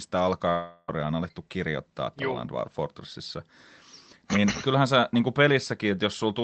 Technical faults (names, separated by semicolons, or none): long network dropout